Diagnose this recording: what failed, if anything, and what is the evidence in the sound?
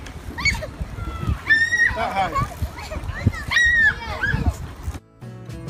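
Nothing in this recording points to a failure at any stage of the chain. Listening across the whole clip turns up no event that would implicate the wiring, converter, driver, processing, transport, storage or playback.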